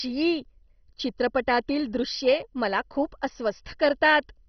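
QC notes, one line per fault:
Throughout: MP2 compression. The speech sounds dull and muffled, with nothing above about 6.1 kHz, and carries a heavy gurgling, granular distortion as upper bands drop out and flicker. This likely comes from MPEG Layer II coding at a very low bitrate, which fits around 32 kbps.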